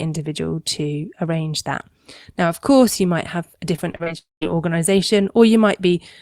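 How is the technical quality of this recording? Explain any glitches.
The recording has two connection glitches close together in the second half.

From 3.76 to 4.08 s, just after "you might have a", the sound turns choppy, with pieces clipped out. This is repeated packet loss. Several short runs of audio, the longest about 35 ms, failed to arrive in time. Each gap was filled by stretching the preceding sound, so roughly a third of that span is synthetic fill rather than real audio.

Shortly after, from 4.18 to 4.43 s, the audio collapses into a brief fading buzz and then near-silence for about 180 ms before returning, with about a quarter of a second of material gone. This is a long network dropout, likely a short interruption of the stream. The receiver extended the last sound briefly, then stopped once nothing more came through.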